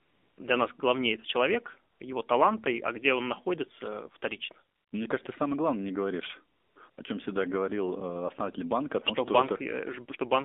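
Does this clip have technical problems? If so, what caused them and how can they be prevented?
Yes. The speech has passed through the AMR narrowband mobile codec at 7.4 kbps, and the damage is plainly audible. The line carries roughly 250 Hz to 3.6 kHz, so nothing above that survives. At this low rate the vocal-tract model has few pulses to work with, so the voice sounds buzzy and synthetic. Plain band-limiting would sound muffled but still natural, and that buzz is what sets this codec apart from it. Prevention: use a wideband codec or a higher AMR mode.

AMR comfort noise fills five pauses where the phone stopped sending speech frames: 0.00–0.38 s before "для нас главнее это", 1.94–2.00 s between "нас главнее это человек" and "его таланта и а", 4.76–4.92 s, 6.56–6.76 s between "самое главное не говоришь" and "о чем всегда говорил", and 6.90–6.98 s. The receiver substitutes a smooth, steady synthetic hiss for the real background, and it switches in and out. 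A plain noise gate would drop to silence there instead of hiss. Prevention: disable discontinuous transmission or tune voice-activity detection less aggressively.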